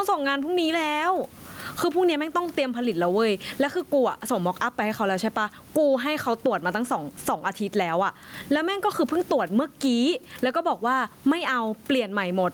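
Gain pumping runs through the whole recording. Each time the talker gets loud, the gain is pulled down, a swing of roughly 15 dB. The likely cause is mic gain set far too high, with a fast limiter or compressor clamping down on every loud syllable. That flattens the speech into a squashed level, and the room noise sits normally about 40 dB under the voice.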